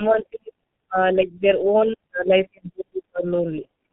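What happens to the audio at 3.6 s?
VoIP packet loss concealed by the speech codec occurs from 3.62 to 3.66 s. About 30 ms of audio, which fits a single lost frame, is missing, and the decoder fills the gap by extending its last pitch and filter at falling gain. The speech stretches into a brief buzzy tone or coloured noise that fades, and sounds weak or distorted for a moment after the gap.

Throughout the clip, the G.723.1 codec at 6.3 kbit/s removes everything above 4 kHz and tracks the voice slowly. That leaves this passage, like the rest, muffled and hoarse with blurred consonants.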